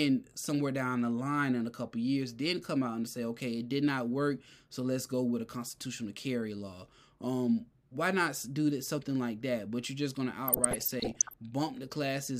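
From 10.48 to 11.34 s the speech breaks into DAB burbling. Weak reception let bit errors slip past the error correction into the MP2 audio data, at a rate that points to around half a percent. Corrupted samples drop brief noise blips into individual sub-bands. The sound burbles with short noise blips across nearly a second of speech. The disturbance ends at 11.34 s.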